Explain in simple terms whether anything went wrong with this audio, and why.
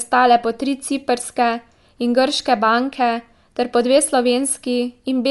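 The speech was most likely squeezed through Dolby Digital compression at too low a data rate, so the encoder discarded fine detail. From start to finish nothing sounds above 11.5 kHz, leaving it dull, with a rough, fluttering hiss clinging to the voice.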